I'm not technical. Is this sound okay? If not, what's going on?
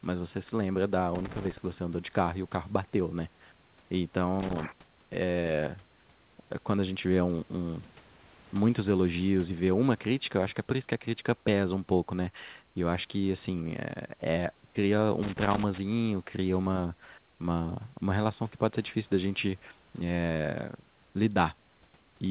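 No. There is loose connector crackle at three points: from 1.15 to 1.58 seconds, from 4.40 to 4.65 seconds, and from 15.23 to 15.78 seconds. Each time, you hear a short, uneven burst of scratching or crackling over the speech. It happens when a worn or dirty plug or cable contact is jiggled and keeps touching and losing contact. The sound cuts in and out very quickly, and each break can add a small pop.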